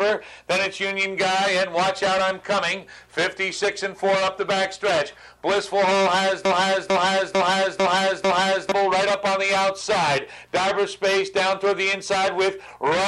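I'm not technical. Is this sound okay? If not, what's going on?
No. From 6.45 to 8.72 s there is a broken-record loop: a short piece of sound, about 0.45 s long, plays five times back to back. The player or stream likely stalled and kept repeating its last fragment, so the audio meant for that stretch is missing.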